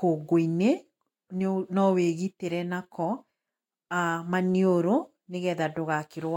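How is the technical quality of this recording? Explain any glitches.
Nothing stood out on listening to this speech recording that would count as a glitch or technical problem.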